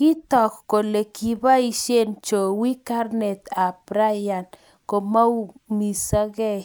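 Nothing in the recorded speech signal points to a technical fault at any moment.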